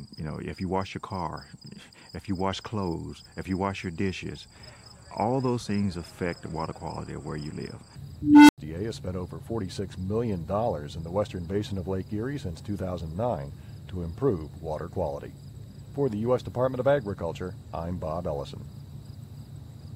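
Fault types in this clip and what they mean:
Unstable filter: A feedback filter in the signal chain has lost stability, so its output feeds on itself and grows without bound. At 8.22 s a low tone of around 300 Hz appears and swells over about 0.27 s into a loud, clipped hum. The values then overflow and the output drops out, leaving roughly 90 ms of silence. The sound returns once the filter resets, with the whole event over by 8.58 s.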